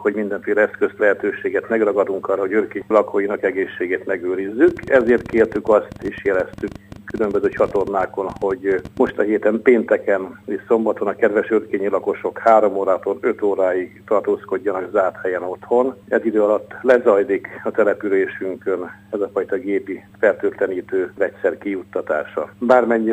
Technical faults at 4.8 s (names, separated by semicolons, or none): train of clicks